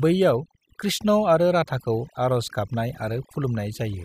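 A speech recording with overdone noise removal from start to finish. The noise reduction stage is gating individual frequency bands hard whenever their level sits close to its noise estimate, so it strips the noise but also cuts away low-level parts of the speech in those same bands. Between phrases the background drops to an unnatural hush sprinkled with chirpy, twinkling artefacts.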